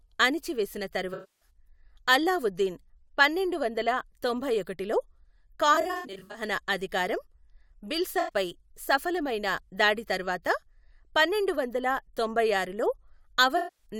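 Speech with four patches of AAC frame loss with concealment: 1.13–1.50 s, 5.74–6.42 s, 8.20–8.34 s and 13.57–13.86 s. In each, the decoder fills the gaps by rebuilding the last good spectrum, so the sound turns smeared, noisy or phasey rather than dropping out. The 1.13 s patch loses about 280 ms of audio. At 5.74 s the losses are scattered, with runs no longer than about 70 ms.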